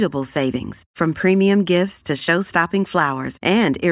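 No technical faults can be heard anywhere in this recording.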